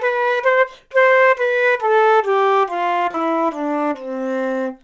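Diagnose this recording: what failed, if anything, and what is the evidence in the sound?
Short concealed packet loss on the network, 3.11–3.17 s: 30 ms never arrived and the decoder extended the preceding sound, giving a brief smear instead of a hard dropout.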